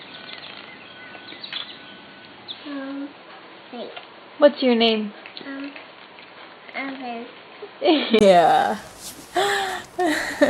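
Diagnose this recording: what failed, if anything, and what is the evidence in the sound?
Input switched to a poorer device, at the capture or driver stage: from 0.0 to 8.21 s the sound is dull and boxy with nothing above 4.5 kHz and a faint noise floor far below the signal. At 8.21 s a 20 ms gap leads to full bandwidth at much the same level. A spectrogram shows a flat ceiling ending abruptly, and the waveform shows a brief dropout. The likely cause is capture from a narrower-band device before switching back to the main input.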